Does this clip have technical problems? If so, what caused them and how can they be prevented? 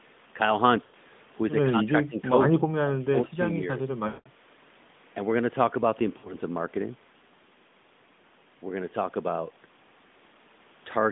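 Yes. Lost AMR speech frames cause dropouts at 0.84 to 0.95 s, 4.08 to 4.29 s, and 6.18 to 6.34 s. The decoder repeats its last good frame with falling gain, so the sound smears and fades. Better radio coverage or stronger error protection prevents this.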